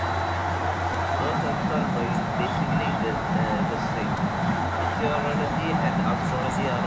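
Speech, with a delayed copy of the voice trailing the talker from the start to 5.04 s and again briefly at 6.82 s, lagging by about 0.38 s and roughly 10 dB quieter. This is likely an echo leak from a far-end loudspeaker that the echo canceller missed. A discrete repeat at that fixed lag sets it apart from room reverberation, which smears continuously. At 0.94 s and 4.17 s, a repeated buffer produces a tiny click-buzz: a 4 ms slice plays two extra times with hard joins, which fits a 64-sample buffer. Unlike a dropout, the gap is filled with repeated audio rather than silence.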